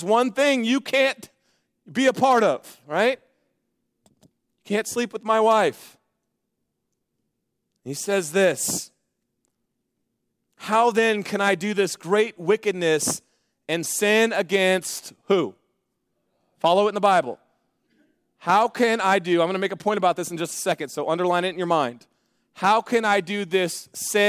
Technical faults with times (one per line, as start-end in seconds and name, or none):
none